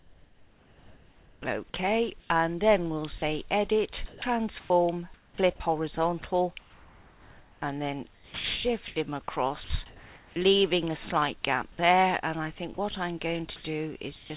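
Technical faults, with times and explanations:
0.0–2.3 s, 4.06–5.38 s, 6.6–10.36 s, 12.74–14.3 s, sound chopped by the voice detector: about 1.5, 0.5, 2.2 and 0.26 s respectively become comfort noise, likely from repeated detector switching. The spectrogram shows flat grey noise patches alternating with real content, and the waveform shows choppy bursts.
3.18–3.22 s, sound dropped by the voice detector: a 40 ms piece, likely judged background, becomes steady comfort noise. It appears as a thin smooth noise strip, band-limited below 4 kHz like everything else.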